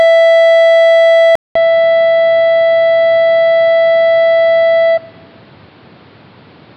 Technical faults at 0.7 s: none

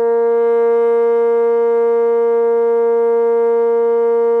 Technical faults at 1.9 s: none

